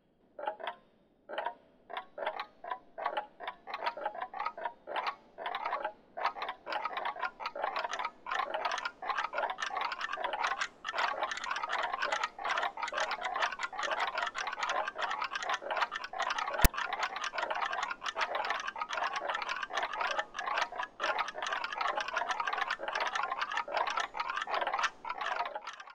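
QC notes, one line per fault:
16.65 s, file tags played as audio: a block of text tags stored inside the file was handed to the decoder as if it were sample data, so the bytes of those characters were turned straight into waveform values. Because text bytes cluster within a narrow range, the result is a loud, rasping snap pushed off to one side of zero rather than centred on it, with hard edges at both ends that cut abruptly into the surrounding sound.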